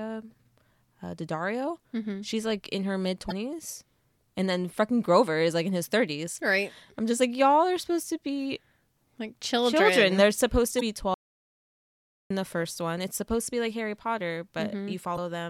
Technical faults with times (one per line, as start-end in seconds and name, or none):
3.28-3.32 damaged data in a compressed stream
10.78-10.82 damaged data in a compressed stream
11.14-12.30 audio dropout to silence
15.14-15.18 damaged data in a compressed stream